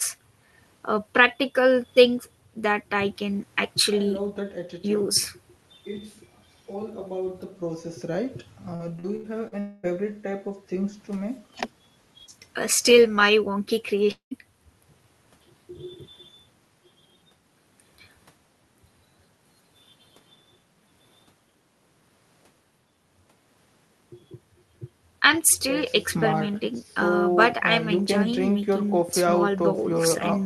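Speech, carried over a call link whose Opus coding keeps content up to about 12 kHz, turns choppy and robotic from 8.75 to 9.55 s. That is repeated packet loss: four short holes, the longest 80 ms, each patched by stretching the preceding sound, so about a quarter of that span is synthetic fill. Right after, from 9.60 to 9.86 s, the sound smears into a continuous buzz that never falls silent, and from 14.11 to 14.34 s a similar fading hiss gives way to about 110 ms of silence. Both are likely a long network dropout, with roughly 0.24 s and 0.2 s of audio never arriving and the receiver filling the gap before the sound resumes further on.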